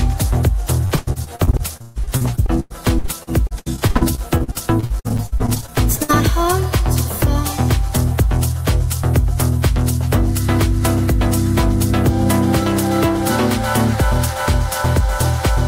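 From 0.85 to 6.11 s there is repeated packet loss (robotic sound): dozens of short dropouts, the longest 138 ms, each patched by extending the preceding sound. About a third of the stretch is filled this way, giving choppy audio with fragments missing.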